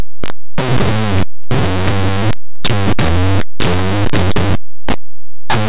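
From start to end, linear audio is read as companded. Plain 8-bit linear samples were decoded as mu-law codes. Small values just on one side of zero jump to near full scale. The speech comes out as loud, harsh distortion throughout.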